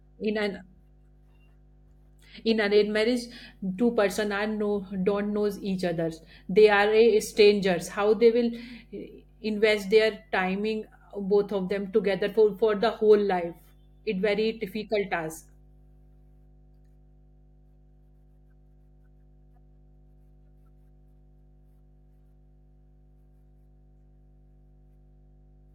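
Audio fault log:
throughout: mains hum. A steady low tone at 50 Hz sits under the speech for the whole clip, along with some low harmonics. The hum is roughly 30 dB below the speech. A ground loop or a nearby transformer is coupling the power line into the signal.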